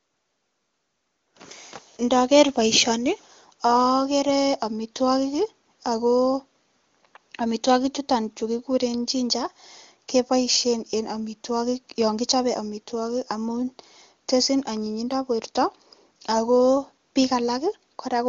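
This speech clip, carried over AMR wideband (HD Voice) at 23.85 kbit/s, has nothing technically wrong with it.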